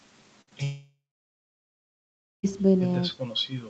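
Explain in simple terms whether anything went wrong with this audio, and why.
Burst of packet loss, 0.41 to 0.49 s: about 60 ms of speech never arrived, so the receiver stretched the last sound into a fading buzz or hiss.

Short concealed packet loss, 0.49 to 0.53 s: another 20 ms went missing right after, patched by continuing the previous sound, heard as a brief smear.

Long network dropout, 0.63 to 2.45 s: the sound fades briefly, then goes silent for about 1.45 s. The likely cause is that no audio arrived for about 1.8 s, and that speech is lost.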